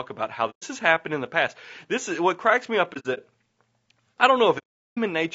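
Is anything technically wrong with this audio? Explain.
Yes, two problems. Throughout, the speech sounds rough and grainy with a thin top end, likely low-delay AAC (AAC-ELD) running at around 32 kbps.

There's also AAC frame loss with muting: soft-faded holes at 0.50–0.63 s (after "about how"), scattered dropouts over 2.93–3.19 s (after "what cracks me up"), and a long gap at 4.58–4.98 s, where the decoder zeroed the missing frames.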